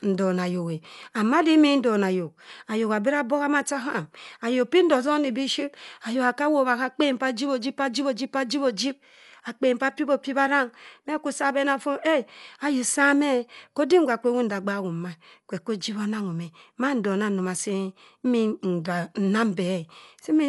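It's a speech clip, and the whole thing carries plainly audible Dolby Digital compression damage. Nothing gets through above 11.5 kHz, so it sounds dull, and there's a rough, fluttery noise hanging around the voiced parts. That's likely an AC-3 encoder starved of bits, consistent with roughly 64 kbps, narrowing the band and leaving many frequency lines without mantissa bits, so the decoder fills them with dither noise.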